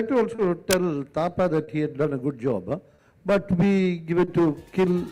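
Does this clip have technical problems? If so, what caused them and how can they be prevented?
Yes. There are three kinds of fault.

Clock drift between sender and receiver runs through the whole clip. The sender's clock is slow, by roughly 2 percent. The receiver consumes audio faster than it arrives, so its jitter buffer keeps draining. The result is small timing hiccups that recur at uneven intervals. Prevention: have the receiver resample to track the sender's actual clock rate.

A short stall from a late packet happens four times: at 0.35–0.40 s, 1.64–1.69 s, 2.95–3.00 s and 4.24–4.29 s. Each time a packet was due but absent, and the buffer ran dry. The receiver held the last sound for about 30 ms, then resumed from the same point. Nothing is lost. A sound just lingers too long with a faint buzz or dip, and the delay grows by 30 ms each time. Prevention: use a slightly deeper adaptive jitter buffer and fix the clock mismatch that drains it.

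Cable scratch noise appears from 0.71 to 0.88 s. It is a dense, uneven burst of scratching or rustling laid over the sound. It is loud, not far below the signal itself. The likely cause is a worn cable, connector or control being moved, so its contact resistance jumps around rapidly. Prevention: replace or clean the faulty cable or connector and secure it against movement.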